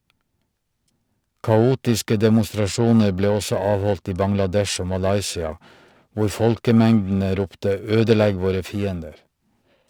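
From start to finish the speech carries periodic clock jitter. The converter's sample clock was being wobbled by interference at a steady rate of around 1 kHz, so each frequency in the speech picks up sidebands spaced about that far above and below it, and the higher content suffers most. You hear it as a rough, metallic fizz riding on the voice, strongest on the brighter sounds, and it drops away entirely in the pauses.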